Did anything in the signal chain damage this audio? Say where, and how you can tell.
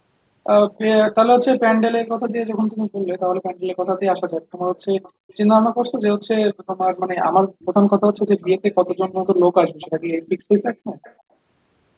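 Yes. There is an echo leak in the call processing. A faint delayed copy of the speech trails by about 0.31 s at 5.03–5.34, 6.5–6.87, 7.6–7.66, 8.16–9.27, 9.8–10.43 and 11.03–11.14 s. It sits roughly 20 to 30 dB down. The likely cause is a far-end echo canceller passing its loudspeaker pickup back.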